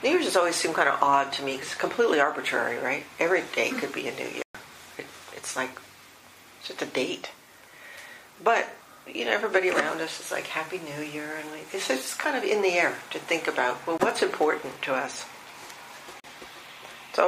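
Bluetooth dropout, likely, at 4.42 to 4.55 s, 13.98 s and 16.20 to 16.24 s: the sound cuts to silence for about 122 ms, then 20 ms, then 41 ms, when data failed to arrive in time. Each gap starts and ends abruptly or with a fade of a few milliseconds, and the audio resumes further along, as though it had kept playing.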